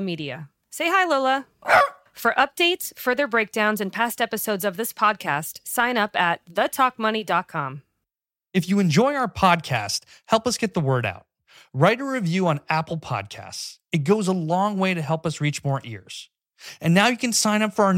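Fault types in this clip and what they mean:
No technical faults can be heard in this speech recording. There is nothing to list for any part of the clip.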